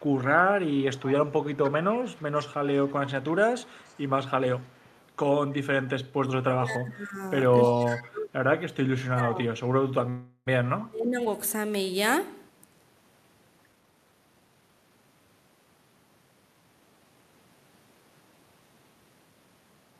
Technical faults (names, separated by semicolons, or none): echo leak; speech suppressed in double talk; call audio freeze; jitter buffer speed-up